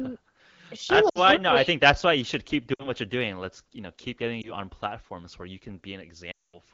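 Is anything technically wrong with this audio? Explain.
Yes. There are lost AMR speech frames at 1.09 to 1.18 s, 2.74 to 2.90 s, 4.41 to 4.53 s and 6.32 to 6.59 s. Corrupted frames were concealed by repeating the last good pitch and spectral shape at falling gain. This causes brief warbling dips; the final, roughly 220 ms gap drops to near silence within two frames. On a spectrogram each gap shows smeared, repeated harmonics, and the waveform envelope sags there.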